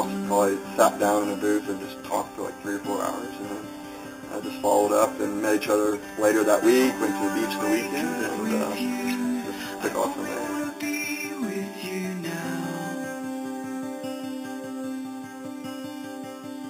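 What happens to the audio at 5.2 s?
At 5.2 s, as across the whole clip, the sound shows imaging from sample-and-hold upsampling: each sample was simply held at an 8 kHz rate and converted up to 44.1 kHz with no smoothing filter. Mirrored spectral copies between 4 kHz and 8 kHz, about 16 dB below the signal, add a bright metallic fizz that tracks the sound's level and runs counter to its pitch.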